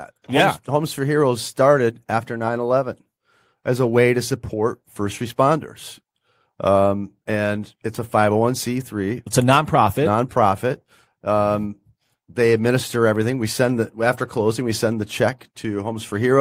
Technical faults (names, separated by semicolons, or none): none